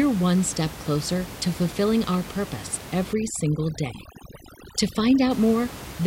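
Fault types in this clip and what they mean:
Overdone noise removal: After "to fulfilling our purpose", from 3.13 to 5.31 s, heavy noise reduction mutes frequency bands. The background drops to twinkling specks.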